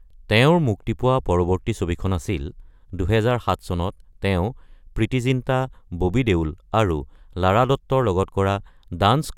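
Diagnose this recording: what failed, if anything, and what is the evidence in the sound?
No stage in the chain, from wiring and conversion through buffering, processing, transmission, storage and playback, leaves an audible fault anywhere in this speech recording.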